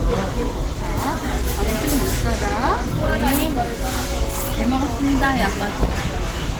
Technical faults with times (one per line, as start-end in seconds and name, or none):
0.00-6.59 Opus compression